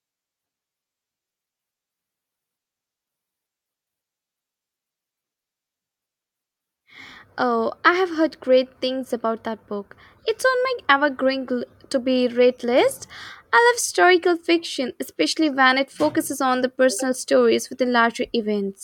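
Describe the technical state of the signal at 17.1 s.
At 17.1 s the speech signal is intact, with no audible fault at that moment.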